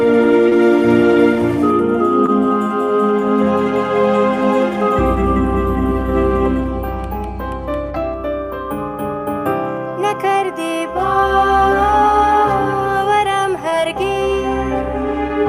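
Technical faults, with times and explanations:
0.49–0.66 s, 2.26–2.30 s, 13.70–13.74 s: short concealed packet loss. About 20 ms went missing each time, and the receiver patched it by extending the preceding sound. That leaves a brief smear or wobble.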